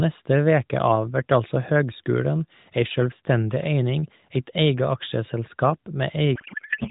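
At 6.36 s a codec payload misread takes over and runs to the end of the clip at 6.90 s. The AMR narrowband stream, which points to a 12.2 kbps mode with only light coding damage before this, is suddenly decoded with its bit fields shifted. The pattern fits octet-aligned frames being read as bandwidth-efficient ones. The speech collapses into garbled, warbling noise that barely tracks it. On a spectrogram, the harmonic bands give way to a disordered smear still capped at 4 kHz.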